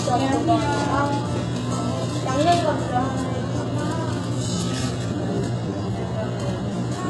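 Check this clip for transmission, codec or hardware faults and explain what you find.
Two faults are audible: codec damage across the whole clip and a slowed section near the end.

HE-AAC compression runs from start to finish, and the heavy damage is likely from this codec at a very low bitrate, around 12 kbps. Nothing is present above 11.5 kHz. The codec spends its few bits on the lower spectrum and fakes the treble by copying lower bands upward under a coarse envelope. That synthetic top end does not match the real harmonics, so high-frequency detail sounds gritty and metallic rather than crisp.

A time-stretched section begins at 4.1 s and continues to the end. The audio plays at about 0.68 times the original speed while the pitch stays put. This is likely a stretch algorithm that lengthened the material by repeating short slices instead of resampling. The change of pace at 4.1 s is abrupt, and from there the sound drags.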